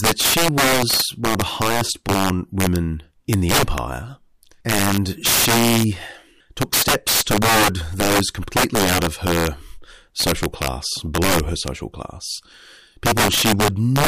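Speech, with integer overflow throughout: the signal runs about 13 dB past the integer limit, and roughly 4 percent of samples wrap to the opposite sign instead of being limited, giving sharp cracks on loud peaks. The waveform shows sudden full-range sign flips; the spectrogram shows broadband vertical streaks.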